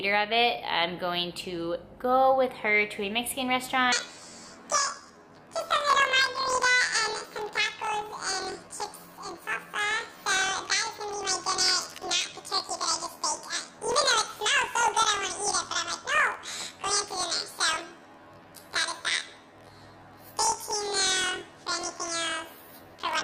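From 3.92 s to the end, planar audio is read as interleaved: each 24 ms block plays twice at double speed, an octave high with a 41.7 Hz buzz, yet the pace stays normal.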